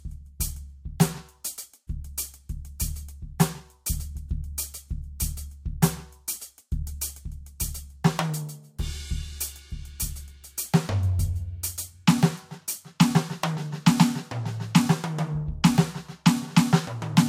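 Transcoding between lossy codecs runs throughout this music: there is nothing above 16.6 kHz, and two kinds of coding smear and swirl sit on top of each other. This is likely an MP3 near 96 kbit/s re-encoded as Vorbis near 47 kbit/s, the second codec re-coding the first's artefacts.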